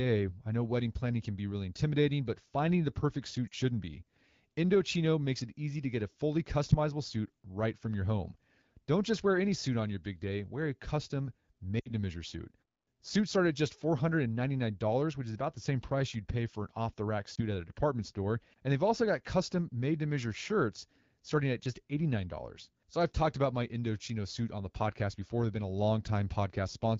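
You get three spots of lost AMR speech frames: 3.48 to 3.54 s after "but finding the perfect", 11.79 to 11.89 s between "day wear a custom" and "to measure suit", and 17.35 to 17.41 s before "at a department store". Each time the decoder bridges the gap by replaying the last good frame at falling gain, giving a brief dip or warble at the single lost frame and a quick fade toward near silence in the longer runs. The middle one lasts longest, fitting about 60 ms of missing audio. The AMR wideband (HD Voice) coding around them sounds clear.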